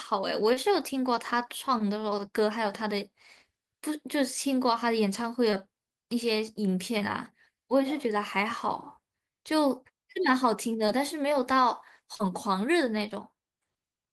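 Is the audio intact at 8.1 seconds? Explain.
Yes, the speech at 8.1 seconds plays through intact, with no dropout, distortion or other fault at that moment.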